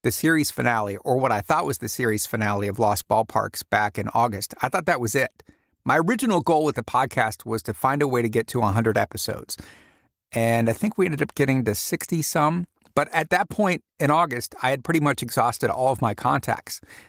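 Nothing in this speech recording stood out as a technical problem on listening.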